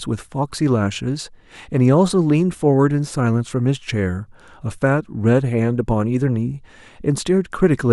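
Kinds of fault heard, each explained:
No technical faults can be heard in this recording.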